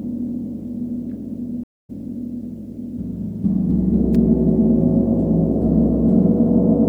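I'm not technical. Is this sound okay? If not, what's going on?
No, there are two problems. The first is a stream reconnect at about 1.64 s. The connection dropped, and the audio goes completely silent for a quarter of a second, until about 1.90 s. The player then reconnected and started decoding fresh. When the sound comes back, it has jumped ahead by roughly a fifth of a second, so a small slice of the audio is simply missing rather than delayed.

The second is a sharp little snap at 4.15 s, lasting just a few thousandths of a second and sitting on top of the audio. That's an electrical switching spike, likely from a nearby switch, motor or a static discharge that the audio line picked up. It's a brief, separate crack added to the recording, not part of the sound itself.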